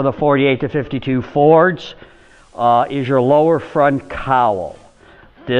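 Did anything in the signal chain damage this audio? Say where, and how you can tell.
Yes. From about 2.02 s the sound eases over roughly 380 ms into a slightly quieter, about 2 dB lower, version with a steady hiss sitting around 40 dB below the signal, and it stays that way until about 5.18 s. This is digital radio blending to analogue at the receiver: the hybrid tuner lost its digital stream and cross-faded to the same station's FM broadcast, whose noise floor and level differ from the digital feed.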